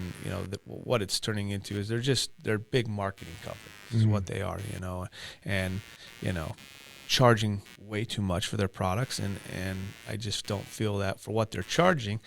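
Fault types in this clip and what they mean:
Computer activity noise, throughout: processor and peripheral load shifts disturb the shared audio ground, adding a buzzy pulsing near 100 Hz, roughly 25 dB below the speech.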